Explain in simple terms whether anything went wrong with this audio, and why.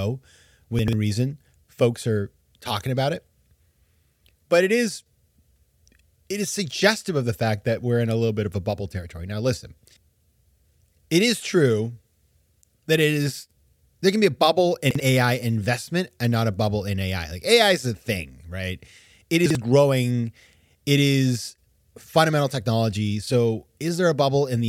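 Something did go wrong: three short moments where chunks play out of order. Around 0.79 to 0.93 s, just before "reason folks are talking", a slice of sound about 46 ms long arrives two slices late. At 14.91 to 15.0 s, right after "can be a bubble", and at 19.46 to 19.55 s, a slice arrives one slice late. Each one sounds like a brief scramble. Unlike a dropout, nothing goes silent or goes missing. The sound is all there, just briefly shuffled.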